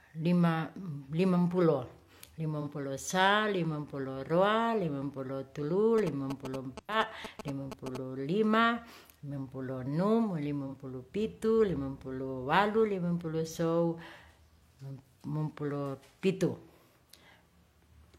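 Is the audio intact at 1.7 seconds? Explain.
Yes, the speech at 1.7 seconds is intact, with no dropout, click, distortion or other fault at that moment.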